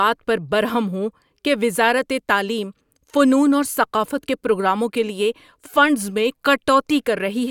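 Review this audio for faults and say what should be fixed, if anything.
Nothing here needs fixing.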